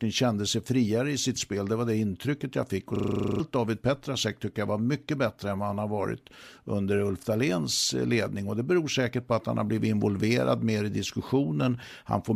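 At 2.96 s, just after "det intrycket jag fick", a system hang loop takes over until 3.4 s. The computer or driver stalled, but the sound hardware kept replaying its ring buffer. One 40 ms slice repeats exactly, 11 times, at a 25 Hz rate. That short loop gives a harsh, rapid rattle, somewhere between a buzz and a stutter. Nothing new plays during it, so about 0.4 s of speech is missing when the sound resumes.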